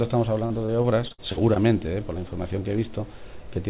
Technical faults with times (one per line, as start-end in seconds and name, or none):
0.46-1.57 repeated packet loss (robotic sound)